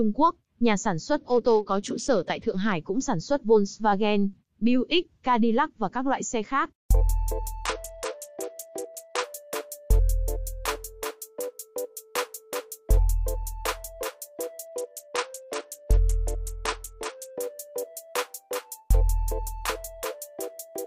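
Bluetooth SBC bit pool drops occur from 1.17 to 2.73 s, 7.66 to 9.24 s and 14.65 to 17.38 s. In each, the treble dulls and a gritty, grainy noise rises underneath the sound, then clears when the rate recovers. The link appears congested, so the encoder cut its bit budget, consistent with a fall from a bit pool near 28 to around 9, roughly 78 kbps. The highest sub-bands lose their bits and the remaining bands are quantised coarsely.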